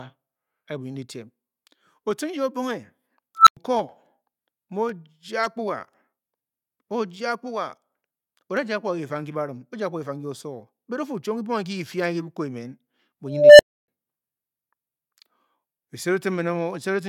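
Speech with two unstable filter faults, where a recursive filter's output runs away. At 3.37 s a tone around 1.5 kHz swells within about 0.1 s, clips, then cuts to about 0.1 s of silence until 3.57 s. At 13.26 s a lower tone near 500 Hz builds over about 0.33 s, then leaves about 0.29 s of silence, ending at 13.88 s. Acoustic feedback would howl steadily rather than collapse into silence after clipping.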